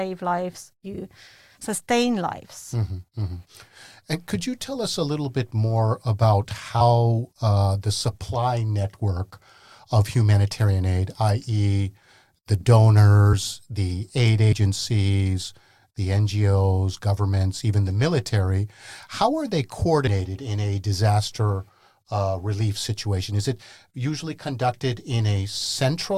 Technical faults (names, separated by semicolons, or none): compressed frames skipped